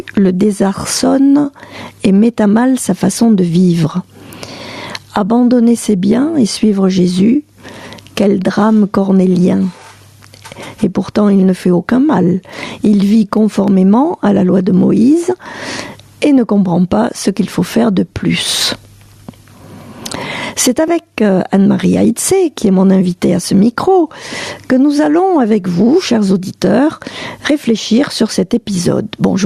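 Gain pumping runs through the whole clip. The level ducks under each loud sound. The level swing is around 20 dB. The likely cause is gain set far too high, with a fast limiter clamping down. Everything sounds squashed.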